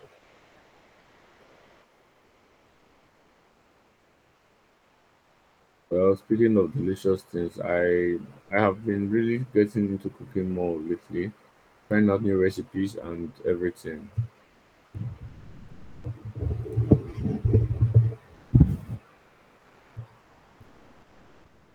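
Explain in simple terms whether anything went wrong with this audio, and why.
Yes. Comfort noise in place of the background replaces the real room sound with steady, featureless hiss, likely from a sender that stops transmitting during pauses. It happens at 0.16–5.90 s, 8.42–8.50 s, 11.50–11.90 s, 14.44–16.04 s, 18.34–18.52 s and 20.20–21.74 s.

An onset clipped by the voice detector occurs at 8.48 s. After "of delicious things I", the next phrase, "I have been really", begins abruptly because its first 20 ms were dropped, likely because the detector reacted late.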